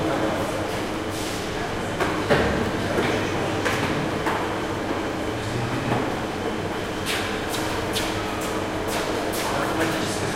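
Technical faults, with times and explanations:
2.64–2.68 s and 6.80–6.86 s, chunks out of order: a 20 ms slice of audio lands late, one slot behind at the first spot and two at the second, so nothing's missing but the order's scrambled, giving a brief jumbled stutter.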